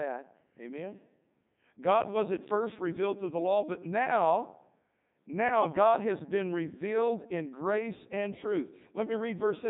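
Throughout, the speech carries heavy Codec 2 vocoder damage: the decoder rebuilds the voice from sine waves using only pitch, voicing and envelope, which fits the 3.2 kbit/s mode. It sounds robotic and buzzy. A spectrogram shows neat harmonic stripes and nothing above 3.8 kHz.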